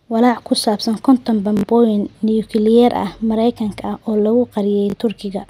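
Two Bluetooth stutters break up this speech. The first runs from 1.57 to 1.63 s, between "ku saabsan konton" and "nukliyeer ah". About 61 ms of audio never arrived, which points to roughly three lost packets. The second comes at 4.90 to 4.94 s, just after "ah oo lagu", with about 41 ms missing. In each, the receiver replayed its last short slice while it waited. That gives a brief buzzy, machine-gun repeat. The sound then resumes further along, as if it had kept playing.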